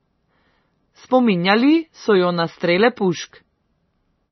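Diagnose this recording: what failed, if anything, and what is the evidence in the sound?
The codec stage failed: the speech carries heavy MP3 compression damage from start to finish. Nothing is present above about 5.9 kHz, so the treble stops abruptly at a fixed ceiling, and the remaining band sounds watery and swirly as weak spectral lines drop in and out between frames. That combination is likely the result of an encoder starved of bits, which fits a low bitrate around 24 kbps, zeroing everything it judged least audible.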